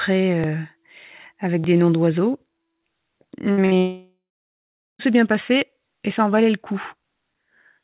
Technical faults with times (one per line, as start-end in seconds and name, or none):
0.44 dropped buffer (overrun)
1.64 dropped buffer (overrun)
3.52-3.73 burst of packet loss
3.77-5.01 long network dropout